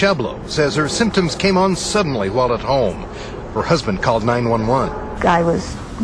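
No technical faults can be heard anywhere in the recording.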